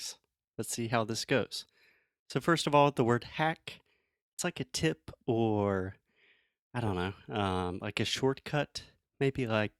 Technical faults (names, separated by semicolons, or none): repeated frames